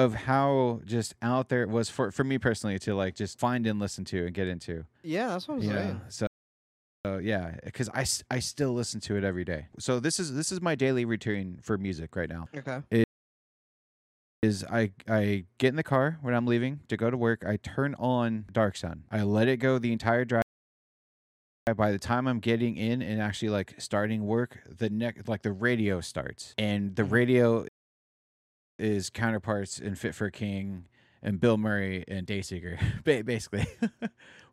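Speech recording with four rebuffering stalls, at 6.27–7.05 s, 13.04–14.43 s, 20.42–21.67 s and 27.68–28.79 s, each 0.78 to 1.39 s long. The player's buffer ran dry, so the audio drops to silence and resumes at the exact point it stopped, adding time without losing any content.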